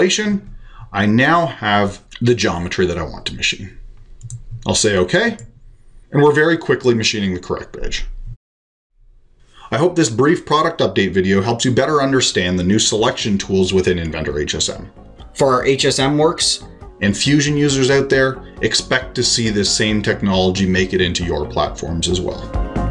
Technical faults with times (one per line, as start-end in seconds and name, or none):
15.21-16.88 wrong sample rate